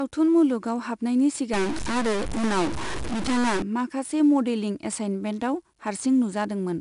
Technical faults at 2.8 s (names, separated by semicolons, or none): 4-bit ADPCM compression; stuck bit